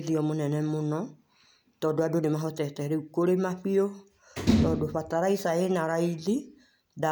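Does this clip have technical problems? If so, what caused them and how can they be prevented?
No, no technical problems heard.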